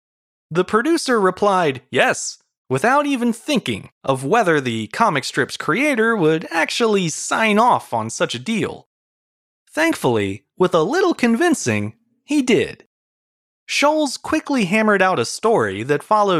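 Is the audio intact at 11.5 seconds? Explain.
Yes, at 11.5 seconds the speech plays through intact, with no dropout, glitch or other fault.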